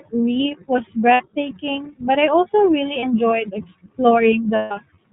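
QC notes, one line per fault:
Throughout: iLBC codec. The speech is band-limited to nothing above 4 kHz and carries a plainly audible rough, slightly synthetic edge, consistent with narrowband coding at about 13.33 kbps in 30 ms frames, each frame's excitation coded independently of the previous one.
1.14–1.22 s, 3.00–3.04 s, 4.55–4.72 s: lost iLBC frames. Each gap is filled by the decoder repeating the last pitch cycle blended with noise, heard as a held, faintly buzzy vowel. The losses are about 60 ms, 30 ms and 150 ms, and the longest one fades as it goes. Because iLBC frames stand alone, the speech recovers almost immediately after each gap.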